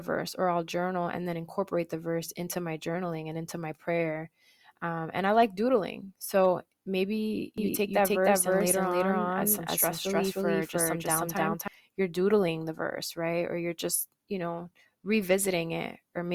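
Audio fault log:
7.58–11.68 s, doubled audio track: for about four seconds the speech picks up a second full-band copy trailing around a third of a second behind, at roughly the same loudness as the original, so every syllable lands twice. There's no decay or room colour on it, and it snaps in and out abruptly at both ends. That points to the audio likely being captured twice, once through a slower path, rather than to any real echo.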